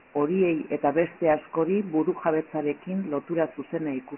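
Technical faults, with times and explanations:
Throughout, Dialogic VOX ADPCM: the speech sits in a narrow phone band starting near 200 Hz, with nothing above 3 kHz, which fits 4-bit ADPCM at 6,000 samples a second. The coarse 4-bit steps leave heavy, gritty hiss trailing the speech.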